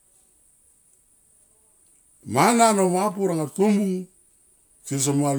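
No technical faults can be heard anywhere in this speech recording. There is no moment that needs a timestamp or a repair.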